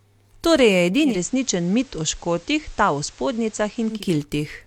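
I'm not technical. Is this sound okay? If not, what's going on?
No. From 1.02 s to 4.05 s there is a digital radio blend to analogue: the receiver lost the digital signal and faded over about 0.18 s to the station's FM broadcast. The sound turns slightly quieter, and a faint hiss appears until it switches back.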